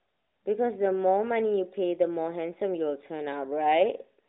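No technical faults occur anywhere in the speech, which comes through a mobile AMR-NB path at 12.2 kbps that keeps it within the narrow telephone band.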